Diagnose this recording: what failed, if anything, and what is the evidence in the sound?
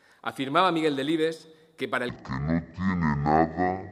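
What failed is a stereo-read-as-mono fault at the sample-format stage. From 2.09 s to the end at 3.91 s, the sound suddenly drops to half speed and sits a full octave lower, 12 semitones down. You'll also catch a faint mirrored copy up in the top half of the spectrum. The interleaved left-right sample pairs are being read as one channel in sequence, so each stereo frame plays out as two samples and time stretches by 2x.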